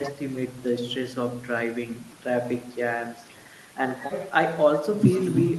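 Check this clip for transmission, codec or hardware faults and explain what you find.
Nothing faulty turns up in this speech: the call path behaves as a call path should, its top end rolling off near 12 kHz, which fits Opus running at around 32 kbps.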